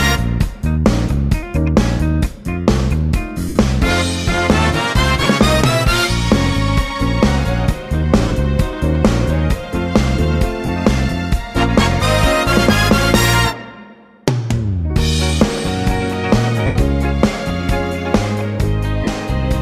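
Lost LE Audio frames at 3.49, 5.22, 8.28, 10.66, 16.66 and 19.04 s: dropped Bluetooth frames were concealed by the LC3 decoder reusing the last spectrum with random signs. Each loss of 22.5 to 90 ms, longest at 16.66 s, smears the sound into brief noisy fill, scattered over 60 ms at 5.22 s.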